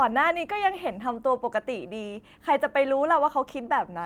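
Speech recording with no audible technical faults.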